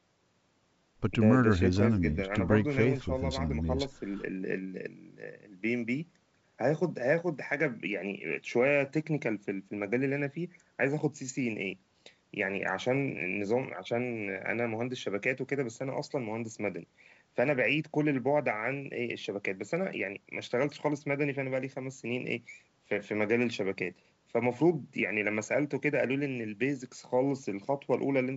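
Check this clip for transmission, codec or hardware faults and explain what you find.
No transmission, codec or hardware faults turn up anywhere in the clip. The speech carries the wideband G.722 coding at 64 kbit/s, which keeps it clear up to about 7 kHz, with at most a faint trace of the coder in the upper band.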